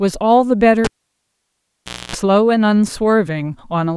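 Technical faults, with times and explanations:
0.84–2.16 s, cable pulled and plugged in: the speech cuts with a pop at 0.84 s and falls to near silence for about 1.27 s while the lead is out. As the plug goes back in, only its tip touches at first, leaving the input unshielded and open to a 60 Hz mains buzz for about 0.27 s. A second pop restores the sound at 2.16 s. The pops at both ends and the buzz just before reconnection set this apart from a plain dropout or steady ground-loop hum.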